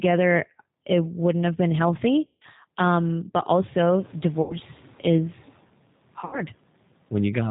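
Speech passed through the G.729 codec at 8 kbit/s sounds rough and synthetic, and a spectrogram shows an empty band above 4 kHz. VoIP packet loss concealed by the speech codec occurs at 2.27–2.43 s (about 140 ms lost), 4.42–4.56 s (80 ms) and 6.21–6.42 s (100 ms scattered over 120 ms). In each gap, the decoder extrapolates from its last pitch and filter with falling gain, which appears as smeared, decaying energy and a shrinking waveform envelope. The room noise, which rises by about 19 dB around 4 s, stays roughly 27 dB below the speech.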